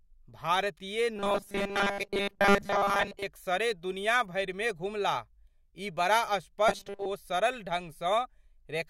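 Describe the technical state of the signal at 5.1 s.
At 5.1 s the speech signal is intact, with no dropout, clipping, glitch or other fault to be heard at that point.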